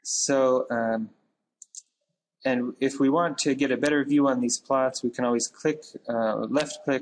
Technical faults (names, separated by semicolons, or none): none